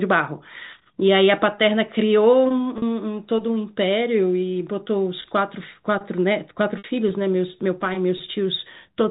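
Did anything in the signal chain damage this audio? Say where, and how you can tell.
Yes. The damage happened in the network stage, as packet loss with pitch repetition. There are three gaps, at 2.78 s, 5.22 s and 6.78 s, lasting about 40 ms, 20 ms and 60 ms. The first two sound like a brief held, buzzy stretch where the sound should move on, while the 60 ms one fades into silence before the speech returns with a short cross-fade. That fits one to three lost 20 ms packets. The receiver filled each hole by repeating the last pitch period. The G.711 telephone band underneath is intact.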